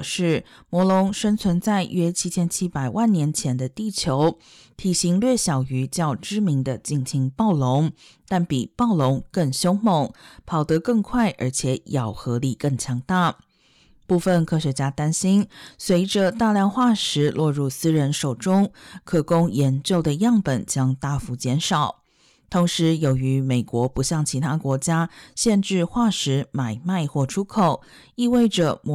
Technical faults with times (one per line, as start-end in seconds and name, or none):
0.00-28.94 hard clipping